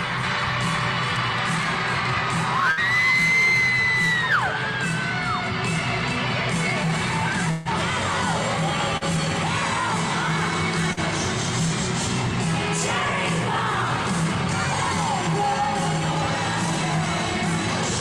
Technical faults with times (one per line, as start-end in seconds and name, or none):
2.71-2.80 burst of packet loss
7.51-7.68 burst of packet loss
8.97-9.04 short concealed packet loss
10.93-11.00 short concealed packet loss